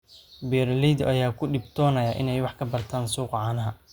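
Listening closely to the speech in this recording, nothing stood out as a technical fault at any point.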